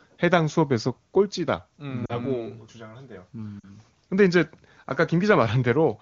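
At 2.05 to 2.17 s and again at 3.60 to 3.65 s, lost AMR speech frames, about 40 ms each (two 20 ms frames), were concealed by the decoder repeating earlier parameters with falling gain, heard as a brief drop to near silence, with the voice coming back weak or rough for a moment.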